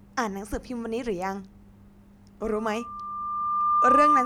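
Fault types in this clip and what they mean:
Loudspeaker feedback squeal: the mic is hearing its own loudspeaker and the loop runs away at one pitch. From about 2.42 s a tone near 1.2 kHz swells over roughly a second and a half, ending around 10 dB above the speech and never let go.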